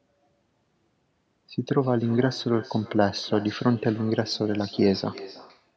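Echo with no canceller runs through the whole clip: every stretch of speech is trailed, about a third of a second later, by a faint copy roughly 20 dB down. The far end is evidently playing the call through a loudspeaker, its microphone catches that playback, and nothing strips it out before it is sent back. The returning copy sounds thin, and like the original it carries nothing above 8 kHz, the limit of the call's microphone path.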